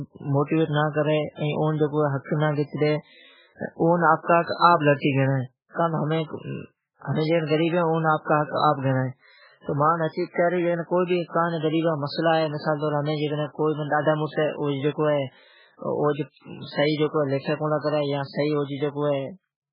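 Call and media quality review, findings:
Speech band-limited, nothing above 5.2 kHz, throughout; watery, swirly texture, smeared onsets. Likely MP3 compression at a very low bitrate, near 8 kbps: treble cut, weak spectral lines dropping frame to frame.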